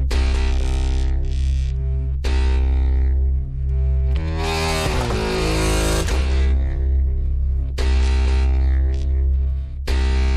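The stream most likely dropped a few samples, a tiny fraction of a millisecond, at 3.45 and 7.26 s, so the waveform jumps and each spot produces a single sharp click.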